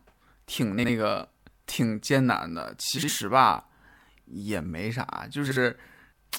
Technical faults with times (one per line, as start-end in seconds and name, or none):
0.78-0.89 frames out of order
2.98-3.09 frames out of order
5.46-5.57 frames out of order